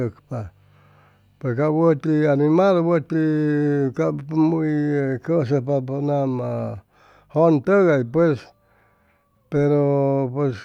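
Listening through this speech recording, nothing stood out as a technical problem at any point.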